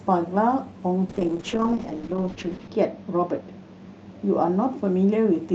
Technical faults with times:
1.11-5.55 call bitrate drop

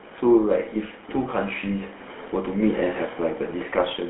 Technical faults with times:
0.00-4.09 GSM full-rate codec

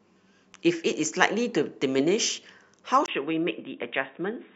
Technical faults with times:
3.06-4.55 input switched to a poorer device

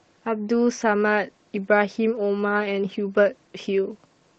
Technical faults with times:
none

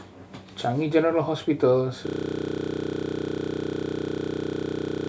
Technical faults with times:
2.07-5.09 system hang loop

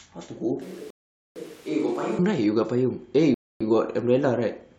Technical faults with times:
0.61-2.19 switch to a distant microphone
0.90-1.36 rebuffering stall
3.34-3.61 rebuffering stall

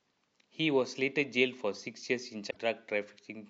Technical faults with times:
2.47-2.57 damaged data in a compressed stream

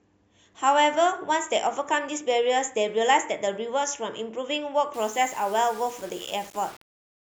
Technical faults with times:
4.94-7.27 low bit depth without dither

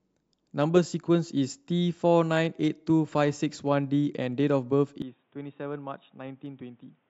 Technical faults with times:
5.02-7.09 input switched to a poorer device

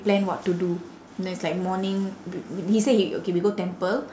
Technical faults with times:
none

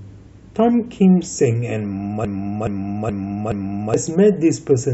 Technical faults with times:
2.25-3.94 broken-record loop

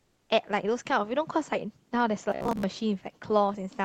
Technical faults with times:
0.00-0.29 comfort noise in place of the background
2.30-2.63 robotic sound from repeated short buffers

